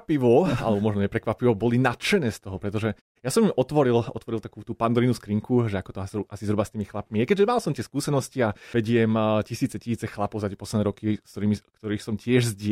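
No technical faults turn up in this speech recording: the signal holds steady throughout, and the background simply drops away in the pauses and comes back in time for the next sound.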